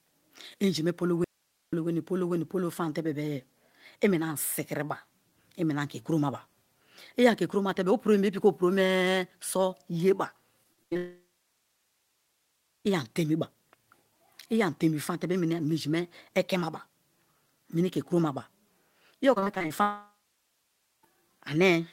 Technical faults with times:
1.24-1.73 audio dropout to a faint residue
10.63-10.97 repeated packet loss (robotic sound)
10.97-12.87 long network dropout
19.35-19.72 repeated packet loss (robotic sound)
19.82-21.05 long network dropout

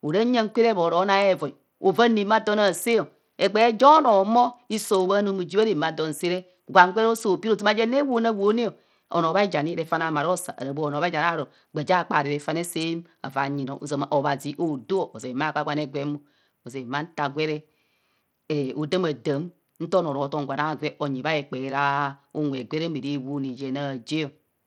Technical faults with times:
0.00-24.67 Bluetooth SBC compression

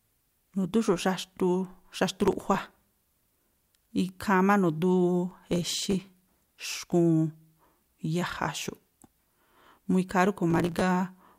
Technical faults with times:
2.09-3.17 processor overload crackle
5.29-6.09 processor overload crackle
10.50-10.81 processor overload crackle

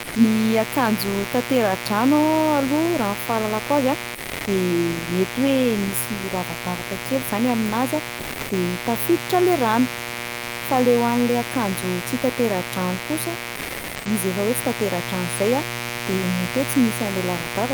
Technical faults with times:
0.00-17.73 mains buzz
0.07-0.13 sound dropped by the voice detector
4.15-4.45 sound dropped by the voice detector
8.23-8.47 sound dropped by the voice detector
13.57-14.05 sound dropped by the voice detector

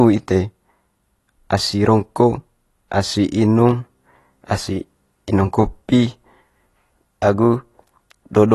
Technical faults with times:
0.00-8.54 AAC compression

